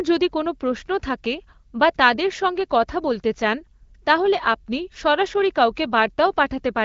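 No technical faults can be heard in the speech, which comes through an AMR wideband (HD Voice) path at 12.65 kbit/s, a rate at which that codec keeps speech clear and leaves only light coding traces.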